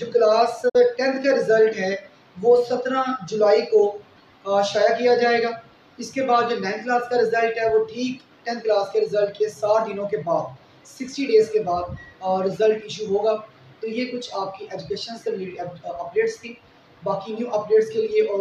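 At 0.68 s the audio fades out over about 20 ms and goes silent. It returns at 0.77 s. This is a digital broadcast dropout. The receiver muted when frames failed, and the length of the gap fits roughly two lost frames.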